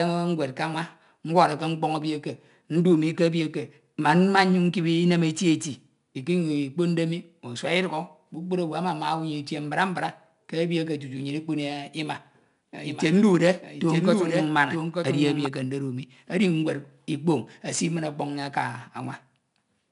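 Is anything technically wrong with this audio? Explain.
Yes. Two faults are audible in this speech.

4-bit ADPCM compression runs through the whole clip. Each sample is coded as a coarse 4-bit step from a prediction, so a gritty hiss rides on every loud passage and sharp attacks distort. Nothing is heard above 10.6 kHz, which fits a stream of roughly 89 kbps. Unlike the swirly artefacts of perceptual codecs, this is steady broadband noise that rises and falls with the level.

A doubled audio track appears from 12.84 to 15.46 s. A full-band copy of the speech, about 5 dB quieter, trails roughly a second behind, likely from a second, slower capture path being mixed in. Unlike a room echo, it has no decay or reverberant colour, and it starts and stops abruptly.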